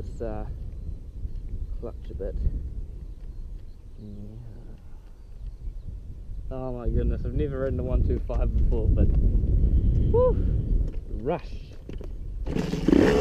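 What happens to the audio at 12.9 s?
Nothing goes wrong at 12.9 s; the audio plays through that moment intact, with no dropout, click or distortion.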